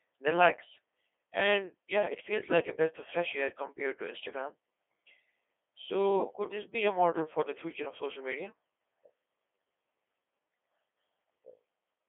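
Throughout, the speech passes through a Codec 2 vocoder that keeps only pitch, voicing, energy and a coarse spectral envelope, consistent with roughly 2.4 kbit/s, and rebuilds the voice from sine waves. Heavy damage results: robotic, buzzy speech, confined to about 300 Hz–3.5 kHz, nothing above 3.8 kHz.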